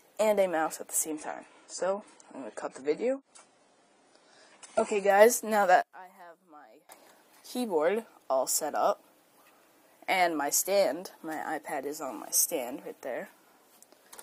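Two separate problems show up in this audio. From 1.10 to 5.10 s you get an adaptive stream at a lower bitrate: the top end suddenly stops around 10 kHz and things turn a bit smeary, which fits the player dropping from roughly 96 to 24 kbit/s AAC, then snapping back without any gap. Then from 5.82 to 6.89 s the level caves in by about 23 dB and what's left sounds faint, the kind of cancellation you'd expect when the channels get summed and one channel is inverted, so that's the likely cause.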